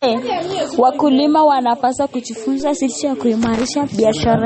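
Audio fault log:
Throughout: likely MP3 compression; nothing above 8.4 kHz, plainly audible watery, swirly codec damage on the speech, which fits a low bitrate around 32 kbps.
2.60 s: DC step; the waveform's zero line jumps abruptly, heard as a low thump, with the offset then decaying away while the speech carries on unchanged.
3.45–3.72 s: loose connector crackle; a contact making and breaking rapidly chops the signal, heard as an irregular burst of crackle and scratching.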